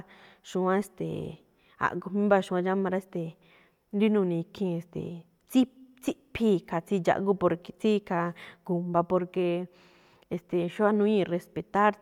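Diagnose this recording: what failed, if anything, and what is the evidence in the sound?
Nothing stood out on listening to this speech recording that would point to a failure at any stage of the chain.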